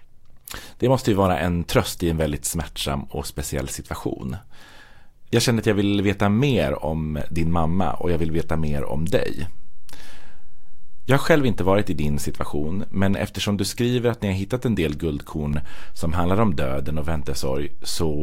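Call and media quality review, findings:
DC step in speech at 7.21 s, after "vill veta mer om", held to 13.14 s, before "eftersom du skriver att"; again at 15.53 s, after "har hittat en del", to clip end. Offset about -21 dBFS. Low thump at each edge. Waveform baseline visibly shifts; spectrogram shows broadband click columns at transitions. Probable converter recalibration or offset input switched in.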